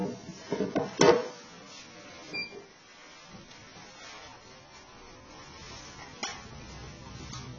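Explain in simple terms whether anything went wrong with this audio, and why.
Throughout the clip the sound is dull and smeared, with nothing above 7.9 kHz and a warbling, fizzy texture on sustained sounds. This is heavy AAC compression damage, likely from squeezing the audio into too small a file, so the encoder threw away fine detail.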